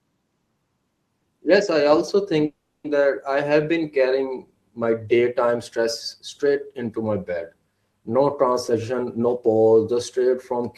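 A speech clip with two faults. The first is a call audio freeze from 2.45 to 2.86 s, right after "I also": the sound smears into a brief fading buzz, then drops to silence for about 0.31 s before resuming with "that I have been". Nothing is lost, but the talk stalls for 0.39 s, which points to delayed packets that likely drained the jitter buffer. A spectrogram would show the last harmonics smeared flat and fading, then a blank column. The waveform would show a decaying tail, then a flat line. The second is a jitter buffer speed-up from 8.69 to 10.62 s. Speech there runs at about 117% speed with unchanged pitch and sounds hurried, as the receiver trims about 0.3 s by cutting many tiny pitch-period slices to shed excess delay. On a spectrogram, harmonics stay at the same height while syllables are compressed in time. The waveform would look denser, with small seams at the cuts.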